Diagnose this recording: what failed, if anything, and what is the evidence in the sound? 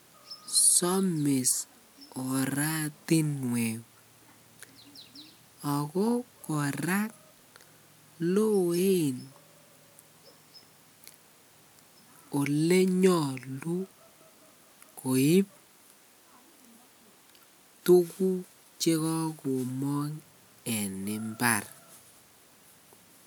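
Nothing failed: no stage of this recording shows a fault, so there is no evidence in the sound to point to.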